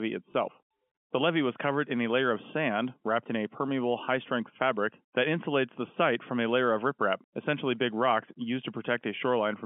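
Telephone-band speech carries one brief packet loss with last packet repeated at 0.32 s. About 20 ms of sound, consistent with a single lost packet, is replayed, giving a small blip rather than the silent gap of a dropout.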